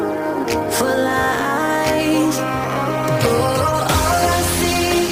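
Throughout, a gritty hiss swells with loud, bright moments and vanishes in silence: sample clock jitter around ten microseconds, error about 15 dB below signal.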